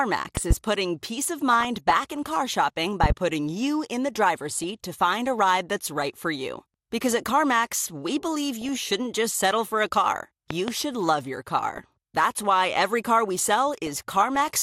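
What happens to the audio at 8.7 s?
At 8.7 s the sound breaks into DAB burbling, running from 8.61 to 8.83 s. Bit errors from a weak digital radio signal have slipped past the error correction and corrupted the MP2 audio data, on the order of a few errors per thousand bits. Wrong samples put short blips of noise into single sub-bands, and wrong scale factors make sub-bands jump in level for up to a frame, so for about a fifth of a second the speech is overlaid with burbling.

Underneath, and through the whole clip, there is plainly audible MP2 compression. The speech sounds dull, with a granular, gurgling texture where upper sub-bands drop out and the remaining bands are coarsely quantised. This fits a low-rate MPEG Layer II stream around 80 kbps, the likely cause of that dull, granular sound. The burbling at 8.7 s sits on top of this coding damage.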